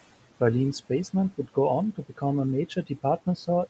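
Across the whole speech clip there are noise suppressor artifacts. The suppressor pulls down the bands it judges to be steady noise by about 17 dB, so the room noise, which sits about 19 dB under the speech, sinks in the pauses and swells back beneath each phrase. That pumping separates the artifacts from the room noise itself.

From 1.93 to 2.23 s, and again from 2.69 to 3.05 s, there is speech cut by the noise suppressor. The suppressor mistakes quiet parts of the speech for noise and lowers them along with the background, by up to about 16 dB in the first stretch and about 14 dB in the second. Roughly 150 ms and then around 100 ms of sound are affected, and what was cut there sounds swallowed or faint. Unlike a packet-loss dropout, nothing goes fully silent and there is no click or gap.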